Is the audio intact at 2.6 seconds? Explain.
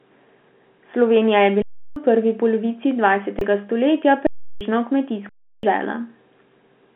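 Yes, the audio is intact at 2.6 seconds, with the speech carried cleanly through G.711 telephone coding and no break, dropout or distortion at that moment.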